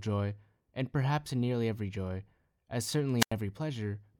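A speech recording in which the radio link of an analogue FM wireless microphone faded at 3.19 s, tripping the receiver's squelch: a wireless microphone squelch dropout. Hiss briefly swells, then the output mutes for about 90 ms before the voice returns by 3.33 s.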